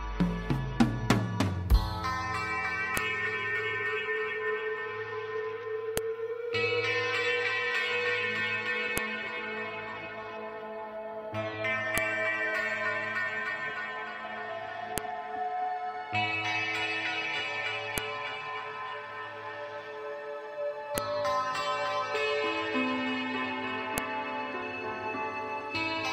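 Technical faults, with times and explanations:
2.97, 5.97, 8.98, 11.98, 14.98, 17.98, 20.98 and 23.98 s: file header played as audio. Header bytes at each 3 s piece's start play as samples, giving sharp snaps that show as thin waveform spikes and vertical broadband spectrogram lines.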